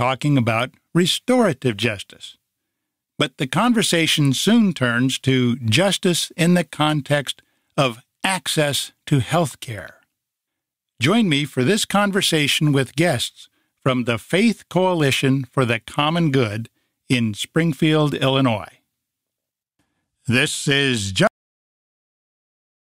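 At 21.27 s the sound stops abruptly mid-event and falls straight to digital silence, with no natural decay, for the rest of the clip. This is a cut-off end: the final buffers of audio were never written or played back.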